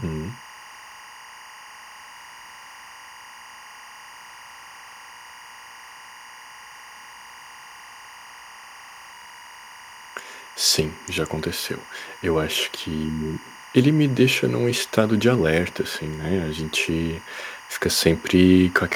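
Throughout, timecode bleed from 23.976 frames-per-second linear timecode leaks into the speech path, leaving a steady chirping warble near 1 and 2 kHz, well beneath the speech.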